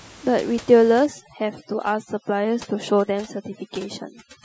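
A short speech recording in which, from 1.06 s to the end at 4.45 s, overdone noise removal takes hold: a noise reduction stage set far too aggressively pulls individual frequency bands down whenever they sit near its noise estimate. The background drops and breaks up into twinkling specks, and softer parts of the voice vanish with it. Before 1.06 s the room noise, about 22 dB below the speech, is still audible as a steady bed. That sudden change at a single point is what sets this apart from low-bitrate codec artefacts, which would smear the whole clip evenly rather than scrubbing away a noise floor that was plainly present moments earlier.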